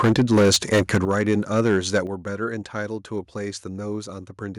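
A speech recording with microphone overload, likely from an input volume set too high for the converter. From 0.0 to 1.31 s peaks run about 11 dB past the limit, flattening roughly a tenth of the waveform into a harsh crackle. A milder burst at 1.57 to 1.98 s, about 2 dB over, adds a crackling edge. The microphone volume is stepped down three times, likely the call software reacting to the clipping by cutting input gain. Voice and background drop abruptly at 0.05 s (about 3 dB), 1.05 s (about 9 dB) and 2.07 s (about 6 dB).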